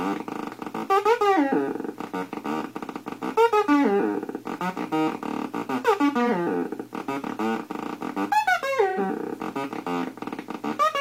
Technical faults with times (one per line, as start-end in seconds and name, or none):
6.24-6.29 AAC frame loss with concealment
8.88-8.99 AAC frame loss with concealment